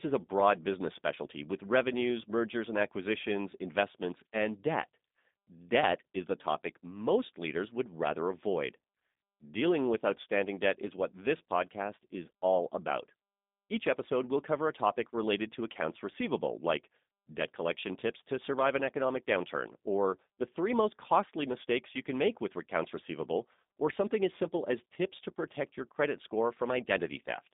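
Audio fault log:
throughout G.729 codec. Speech is plainly rough and synthetic, cut off above 3.8 kHz. It is rebuilt from a filter and sparse pulses, fitting 8 kbit/s.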